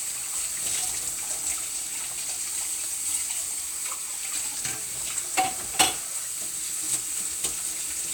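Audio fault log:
No faults are audible anywhere in this recording.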